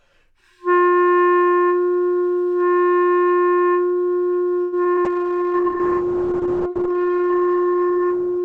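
From 4.61 to 4.99 s, repeated packet loss (robotic sound) opens four holes, the longest 110 ms. About a third of the stretch is patched by extending earlier sound, and 80 ms simply drops out, leaving a choppy texture.

At 5.06 s a call bitrate drop forces the encoder from 96 kbps down to 9 kbps. Bandwidth falls from 20 kHz to 8 kHz, so the sound turns muffled and watery through to the end.

Between 5.23 and 5.62 s, a jitter buffer slow-down repeats short periods to add 51 ms of reserve. That stretch plays at about 88% speed, drawn out but unchanged in pitch.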